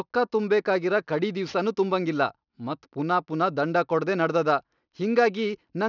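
From the first moment to the end, the speech carries aliasing. The audio was brought down to a lower sample rate, which fits a drop to around 12 kHz, without a filter first removing what sat above the new limit. Everything above 6 kHz folds back below that edge as unrelated tones, sitting roughly 30 dB under the speech. You hear it as gritty, metallic sibilants, with the spectrum crowding right up against 6 kHz.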